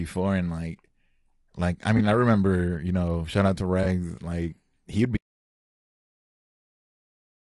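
Speech coded with what is likely low-delay AAC compression of the AAC-ELD kind, at a rate that fits about 32 kbps. The damage is plainly audible throughout: the voice sounds rough and grainy, and on a spectrogram the gaps between harmonics fill with noise while the top band looks lowered or synthetic. Two short patches of AAC frame loss with concealment follow, at 1.97–2.01 s and 3.83–3.86 s, each covering about 20 ms of lost audio. The decoder rebuilt each gap from the last good spectrum, so it comes out smeared, noisy or phasey, and shows as a brief blurred vertical strip where harmonic detail breaks up. From 5.17 s to the end there is an audio dropout to silence, likely from the input being lost while recording continued. The sound cuts off mid-flow with no room tone left, leaving a flat line on the waveform and an empty spectrogram.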